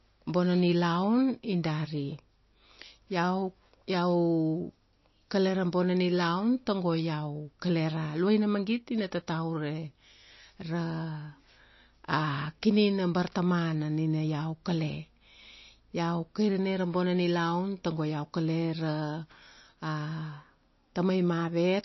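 Throughout this speech clip the sound is dull and watery, with a plainly audible swirl and nothing above 5.8 kHz. That is likely MP3 compression: starved of bits, the encoder cuts the treble and drops weak frequency lines frame by frame, which fits a bitrate near 26 kbps.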